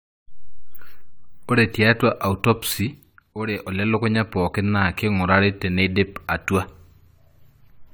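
Generation loss runs through the whole clip, from start to finish. The speech sounds swirly and hollow, with smeared consonant attacks and a watery texture that is worse than a single encode at this quality would give, though content still reaches up to 20 kHz. The likely cause is repeated lossy re-encoding, around ten passes, with each pass quantising on a shifted frame grid so that noise and spectral holes pile up. The sound fits a 96 kbit/s AAC-LC chain.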